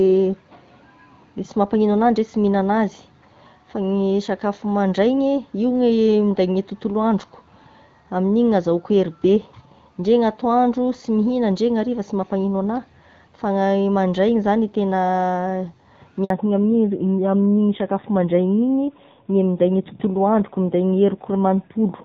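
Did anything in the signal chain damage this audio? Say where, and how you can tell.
Yes. The damage is at the network stage, in a handover gap at 16.24 s. The speech cuts out for about 60 ms and resumes at 16.30 s. The decay is too abrupt for a natural pause, and the sound returns mid-flow. During the switch between networks, no speech frames reached the decoder. It had nothing to play, so that stretch of speech is simply missing.

The second fault is a fallback to narrowband, from 16.30 s to the end of the clip. Before the gap, the speech carries energy up to about 7 kHz, with the light coding texture of AMR-WB at a clear rate. Afterwards, nothing remains above 4 kHz. Sibilants lose their crispness, and the voice sounds duller and rougher. After the handover, the call renegotiated to a narrowband codec, which fits AMR-NB at around 7.4 kbit/s.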